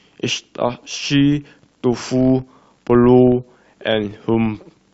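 Throughout the speech, a filter restarted on every block leaves a buzz at 43.1 Hz that swells and fades with the level. Each block starts from empty filter state, causing a tick, a rate that fits 1024-sample blocks. Waveforms show evenly spaced spikes; spectrograms show regular vertical lines.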